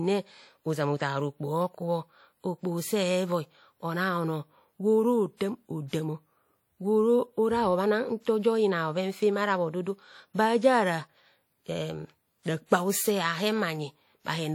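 Throughout the speech, a lossy transform codec, likely WMA, has stored the audio too coarsely: the encoder cut the signal into long blocks and quantised each one with too few bits, and the damage is plainly audible. The quantisation noise smears over tens of milliseconds, giving a ringing, washy texture and a hiss that swells and fades with the speech. The density of artefacts fits a rate of about 48 kbps, although content still reaches up to about 20.1 kHz.

At 5.88 s, a sharp attack landed late in one of those long blocks, so the noise the encoder budgeted for the loud onset was spread across the whole block, including the quiet stretch just before it. This is pre-echo. A short burst of hiss, about 50 ms long, runs from 5.88 to 5.93 s ahead of the onset, and the attack itself sounds softened and smeared rather than crisp.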